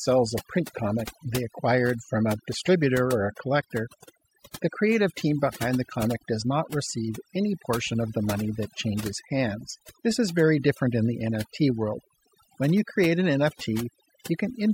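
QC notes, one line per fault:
Throughout, overdone noise removal: the denoiser's pushed way too hard, so any band sitting near its noise estimate gets gated down or out, taking the softer parts of the speech along. You get a near-dead background with twinkly specks.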